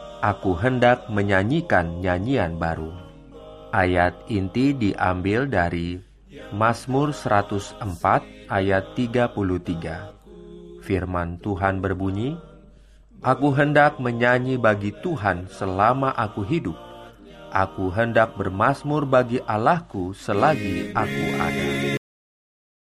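The audio has a cut-off end at 21.97 s. The sound stops abruptly mid-event, with no natural decay or release, and the remaining 0.89 s is silent. This happens when the final buffers of the recording or playback chain are never written out: capture or rendering ends before the last blocks are flushed, so the signal is truncated rather than faded. Only the tail is affected.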